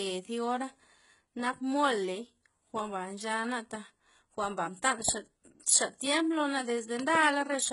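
What sounds like low-bitrate audio saved at a high bitrate runs throughout. The speech was likely squeezed through a very low-bitrate codec before being stored as a larger MP3, so its losses remain and nothing is heard above 11.1 kHz. At 5.09 s, just after "nchana taj jwa'nba", a loud pop from what is likely a sudden voltage spike lands roughly 15 dB above the speech, which carries on underneath. Between 6.99 and 7.17 s a second loud pop event delivers two sharp pops in quick succession at a similar level.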